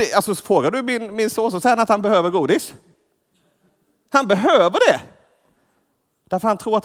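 Listening through the speech recording, nothing stood out as a technical problem at any point.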